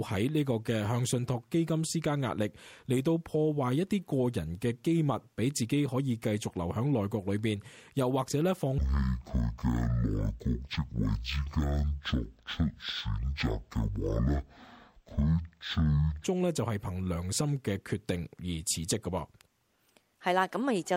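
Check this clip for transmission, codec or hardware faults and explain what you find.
One fault is present: stereo read as mono, from 8.78 to 16.24 s. The interleaved left and right samples are played out consecutively as one channel, doubling the sample count, so the audio runs at 0.5x speed and drops a full octave (-12 semitones).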